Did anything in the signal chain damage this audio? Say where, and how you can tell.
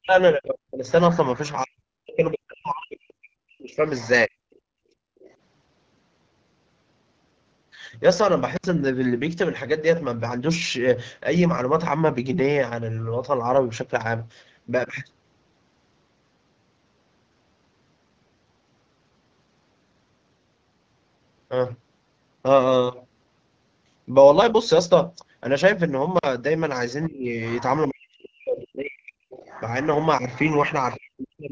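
Yes. Speech suppressed in double talk, from 0.0 to 4.33 s and from 27.08 s to the end, is a call-processing fault. The speech dips as deep as about 40 dB and breaks up. Both sides were likely talking at once, so the echo canceller turned down the local talker along with the echo.

Other side's voice leaking through appears at 0.9–1.52 s, 3.85–5.34 s, 27.04–27.63 s and 29.32–31.0 s. A second voice sits roughly 20 dB below the talker. The canceller likely left residual loudspeaker echo in the microphone signal, again in call processing.

Background gated by the echo canceller runs from 4.61 to 5.19 s. The room tone drops by about 35 dB for roughly half a second while the far end plays. The canceller clamped the microphone hard, then released it, and the ambience returns.

Intermittent contact, in the analogue wiring, occurs at 8.56–8.65 s and 26.17–26.25 s. The sound cuts out for 66 ms and then 43 ms, with crackle at each edge and faint hiss in the gap. 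A loose plug or cable briefly opened the circuit.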